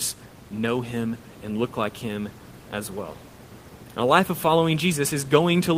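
There are no technical faults to describe at any point in this speech, and the room noise sits about 20 dB below it as part of the recording.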